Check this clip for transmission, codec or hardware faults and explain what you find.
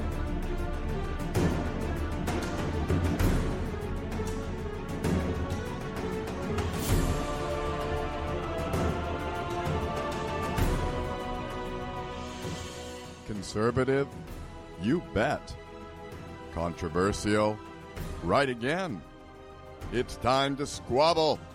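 Nothing stood out on listening to this clip.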